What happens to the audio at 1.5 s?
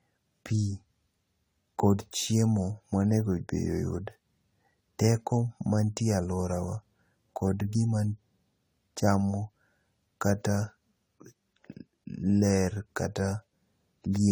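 At 1.5 s, as throughout the clip, the speech has a swirly, hollow, smeared quality with blurred attacks, likely generation loss from around seven successive lossy re-encodes, consistent with 64 kbit/s AAC.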